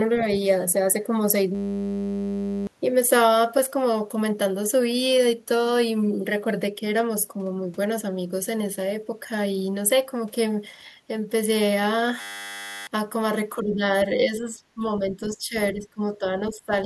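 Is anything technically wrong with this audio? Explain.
Yes, there are two kinds of fault. A system hang loop occurs at 1.55–2.67 s and 12.21–12.87 s. A frozen driver replays one 10 ms buffer, giving a steady 100 Hz buzz. On the waveform this shows as an identical repeating cycle, and on the spectrogram as evenly spaced harmonic lines.

The speech is also suppressed at 13.58–14.82 s and from 14.99 s to the end. It dips by about 15 and 20 dB, likely because an echo canceller mishandled double talk. On the waveform the envelope sags.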